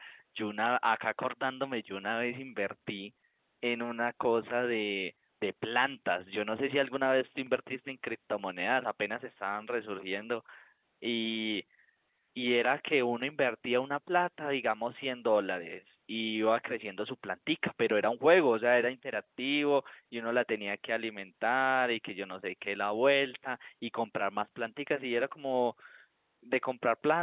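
No technical faults are present.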